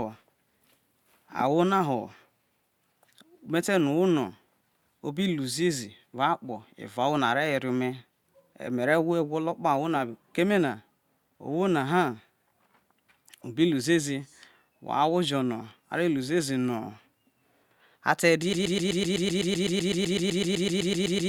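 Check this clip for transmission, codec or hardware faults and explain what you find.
There is one fault: a broken-record loop that runs from 18.53 s to the end of the clip. At that point the speech stops advancing and a fragment of about 0.13 s plays back to back, identically, 22 times. This is likely a stall in the player, encoder or stream, with the last buffered fragment re-sent while nothing new arrives. The result is a rapid, mechanical stutter, and the speech that should have followed is lost.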